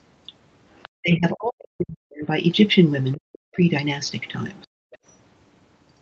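A faint second voice, roughly 30 dB below the talker, surfaces in short scraps at 0.77 to 0.89 s, 3.12 to 3.17 s and 4.91 to 4.98 s. This is the other side's voice leaking through, likely because loudspeaker playback reached the microphone and the echo canceller left a residue. Meanwhile the talker's speech sinks sharply, by as much as around 40 dB, from 0.95 to 2.31 s, again from 3.16 to 3.6 s, and briefly at 4.64 to 4.73 s. That is speech suppressed in double talk, likely because the canceller could not tell the talker from the overlapping echo and turned both down.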